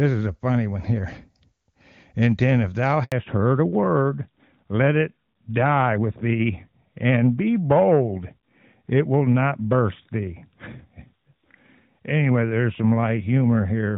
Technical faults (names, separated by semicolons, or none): handover gap; fallback to narrowband